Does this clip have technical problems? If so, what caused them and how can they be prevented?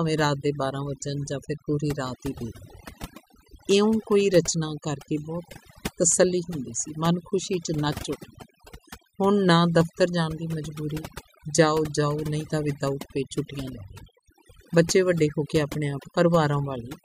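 Yes. Overdone noise removal affects the whole speech clip. A noise reducer set too aggressively pulls individual frequency bands down or out whenever they sit close to its noise estimate, so the background drops and breaks up into sparkling specks, and quieter components of the speech vanish along with it. A noise gate would instead cut the entire signal between phrases and leave no twinkling residue. To prevent it, use gentler reduction settings and check the result by ear.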